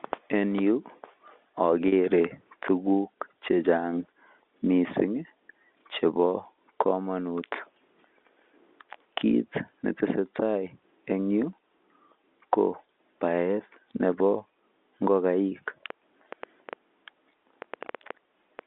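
At 1.88 to 1.92 s, packet loss with pitch repetition: about 40 ms of audio went missing, which fits two 20 ms packets, and the receiver filled it by repeating the last pitch period, giving a brief held, buzzy note. From 15.90 to 18.60 s, a train of clicks, likely from interference or a faulty connection or power supply, lays about ten irregular pops at roughly four per second, some peaking about 5 dB above the speech.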